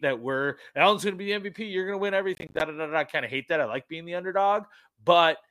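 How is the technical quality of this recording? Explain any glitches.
The recording has one clear glitch. From 2.35 to 2.61 s, just after "going to win" and before "da da da I", a gritty burst of crackle tears through the speech. This is processor overload crackle: the processor repeatedly missed its deadlines, and each late buffer, roughly 10 ms long, dropped out to silence, leaving a rapid chain of hard-edged gaps.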